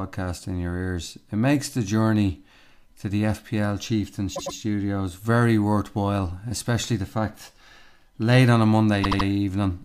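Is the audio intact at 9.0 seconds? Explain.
No. From 9.03 to 9.26 s there are repeated frames: a block of compressed audio about 78.4 ms long was sent three extra times, so the decoder replays it. The speech stutters at that rate and runs 0.24 s longer.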